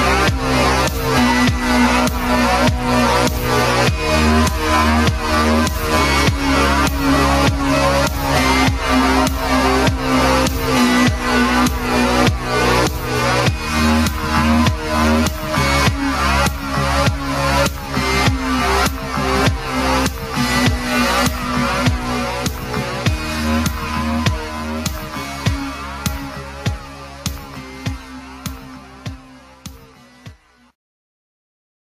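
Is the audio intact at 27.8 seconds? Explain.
No, gain pumping runs throughout, including 27.8 s: the level likely sits far too high while a fast limiter ducks each loud sound, so the gain swings by around 20 dB.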